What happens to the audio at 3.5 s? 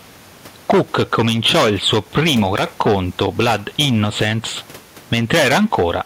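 At 3.5 s you're hearing gain pumping, and it runs through the whole clip. The background swells up in the pauses and dips under each loud syllable, swinging around 10 dB. It's likely a fast limiter clamping down on input gain that's set far too hot, which squashes the speech and drags the room noise, normally about 33 dB under the speech, up and down with it.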